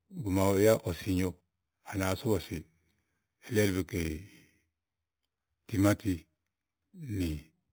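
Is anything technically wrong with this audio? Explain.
Yes: imaging from sample-and-hold upsampling runs through the whole speech clip. The audio was raised from 8 kHz to 48 kHz by repeating samples unfiltered, so mirrored copies appear, the first between 4 and 8 kHz at about 18 dB down, heard as metallic fizz that tracks the speech and, unlike hiss, vanishes in pauses.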